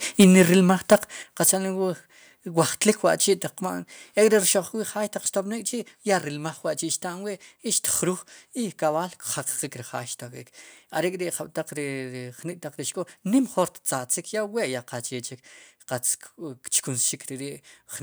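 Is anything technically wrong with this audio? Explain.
Yes. The speech shows repeated microphone overload and two sudden drops in level, all within the first 1.5 seconds.

Microphone overload occurs at 0.20–0.41 s, 0.91–0.95 s and 1.48–1.50 s, with peaks about 8 dB, 4 dB and 3 dB over the converter's limit. The likely cause is an input gain set high enough that the converter flattens the waveform tops, leaving a small share of samples clipped (around a tenth in the middle burst). This gives the loudest syllables a harsh, crackling edge.

Microphone volume stepped down at 0.24 s by about 2 dB and at 1.23 s by about 6 dB. Voice and background fall together in a single step, likely the call software reducing the device input volume after detecting the clipped peaks just before each drop.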